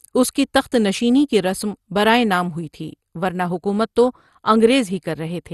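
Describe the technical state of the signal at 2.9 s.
At 2.9 s the speech is passing through MP2 compression, as it does for the whole clip, and this is likely what shapes the sound here. Short of bits, the encoder has switched off its upper sub-bands entirely, so nothing remains above 12.2 kHz, a limit that fits a rate near 64 kbps. The bands that survive are coarsely quantised and flicker in and out, leaving the speech dull with a plainly audible gurgling, granular distortion.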